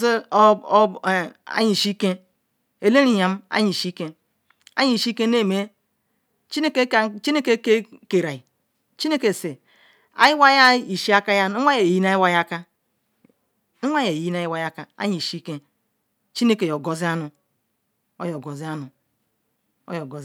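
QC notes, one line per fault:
No faults heard anywhere in this recording.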